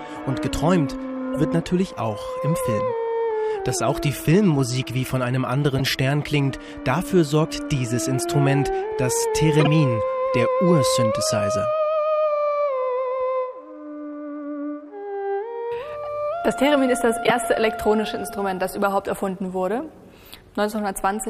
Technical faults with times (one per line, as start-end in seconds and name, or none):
1.34-1.36 corrupt frame decoded
5.78-5.81 corrupt frame decoded
9.60-9.67 corrupt frame decoded
17.23-17.31 compressed frames skipped